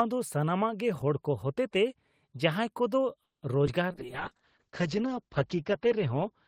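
A speech recording with four network-related faults in its second half. From 3.23 to 3.45 s there is a call audio freeze: the last sound is stretched into a decaying buzz that falls to silence for about 140 ms. Roughly 190 ms of gap is inserted, with nothing lost, and the speech resumes where it stopped, likely because packets stalled in transit and the jitter buffer emptied. At 3.66 to 3.70 s, short concealed packet loss removes about 40 ms of audio. Only a brief synthetic fill of about 10 ms bridges it, so the result is a quick smear or wobble, and the delay drops by a few tens of milliseconds. From 3.92 s to the end, a call bitrate drop takes the encoder from 32 to 7 kbps and narrows the bandwidth from 20 to 8 kHz. The speech becomes muffled and rough, holding the lowest rate for about 1.65 s. Overlapping this, from 4.06 to 4.97 s, a jitter buffer slow-down repeats pitch periods to rebuild its reserve. 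Playback runs at 96% speed, adding 37 ms and slightly drawing out sounds without changing pitch.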